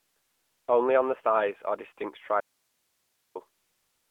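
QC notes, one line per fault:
Throughout: AMR narrowband mobile codec. The speech is confined to a phone-line band of roughly 300 Hz to 3.5 kHz, with nothing at all above 3.7 kHz, so sibilants lose their edge and the voice sounds boxed in. The coder rebuilds each 20 ms frame from a vocal-tract model excited by a few pulses, and the damage is plainly audible as a buzzy, synthetic tone. The degree of it fits a mid-rate mode of around 10 kbps.
2.40–3.35 s: audio dropout to a faint residue. The speech cuts off abruptly for about 950 ms and returns just as suddenly. It does not fade like a natural pause. Through the gap only hiss remains, about 50 dB below the speech level. This points to the signal being lost somewhere upstream, likely a transmission or input interruption, while the path after the break stayed live and kept passing its own noise floor.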